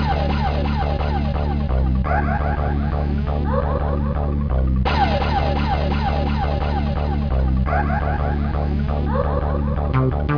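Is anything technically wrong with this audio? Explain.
No, nothing technically wrong turns up on listening to this clip.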